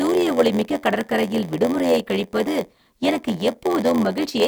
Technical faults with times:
0.00-4.47 block size mismatch (padded)

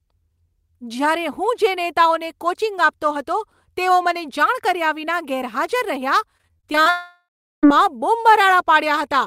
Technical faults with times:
6.37-6.88 repeated packet loss (robotic sound)
6.90-7.69 long network dropout

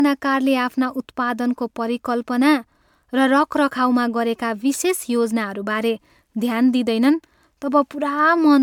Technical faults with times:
0.00-8.62 generation loss

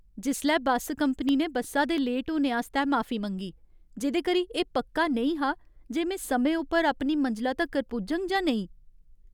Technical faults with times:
1.06-1.98 CD scratch ticks
7.66-8.59 CD scratch ticks

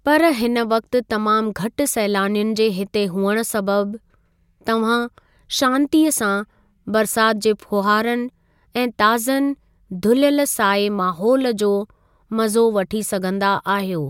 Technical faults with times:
none

